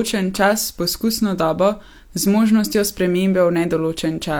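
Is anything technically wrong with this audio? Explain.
No, nothing technically wrong stood out on listening to this speech recording.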